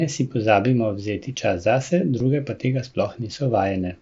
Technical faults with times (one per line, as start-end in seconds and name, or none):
2.19 concealed Bluetooth headset packet loss